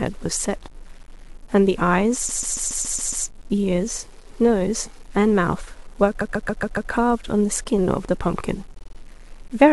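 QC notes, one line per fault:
Throughout: low bit depth without dither. The speech has a grainy, gritty distortion that rises and falls with the voice, roughest in quiet stretches where low-level detail breaks up; the likely cause is truncation to about 8 bits, leaving error roughly 30 dB below the signal.
2.28 to 3.25 s, 6.20 to 6.90 s, 8.78 to 8.97 s: repeated frames. The audio stutters, looping a short block: a 139.3 ms block plays seven extra times, then five, then a 46.4 ms block four extra times, adding about 0.98 s, 0.70 s and 0.19 s.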